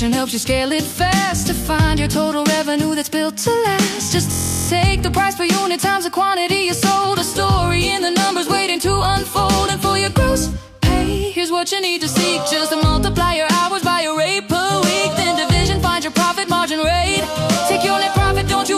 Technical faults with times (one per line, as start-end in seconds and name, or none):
4.32-4.69 system hang loop